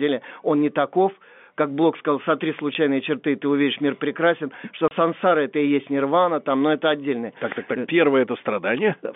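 Packets went missing in transit on this telephone-band speech, and the receiver played silence in their place: a 10 ms dropout at 2.74 s after "сказал сотри", and 30 ms from 4.88 to 4.91 s after "увидишь мир прекрасен что", which fits a 10 ms packet size. Each gap cuts in with hard edges.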